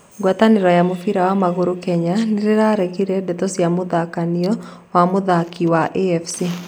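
At 4.44 to 4.46 s, just before "wa mũthaki", the speech is hit by an electrical switching spike: a sharp snap lasting about 24 ms and peaking at about -20 dBFS, sitting on top of the speech rather than replacing it. It is likely an arc from a nearby switch, motor or static discharge coupling into the audio line. On a spectrogram it shows as a thin vertical stripe across the full frequency range, and on the waveform as a brief jagged burst.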